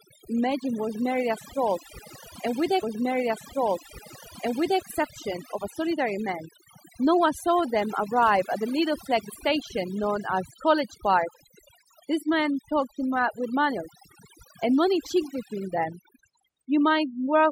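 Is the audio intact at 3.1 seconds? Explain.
No. From 2.82 to 4.82 s a stream segment is repeated: the player queued the same piece twice, so about 2.0 s of speech plays again after a small blip at the jump back. Unlike a stutter or a dropout, it replays a whole stretch rather than looping a tiny fragment or leaving a gap. Overdone noise removal runs through this moment as well. Frequency bands sitting near the noise estimate are pushed far down, taking quiet parts of the speech with them, so the background drops and breaks up into twinkling specks. Plain low-bitrate coding also smears the sound, but it doesn't empty the background like this.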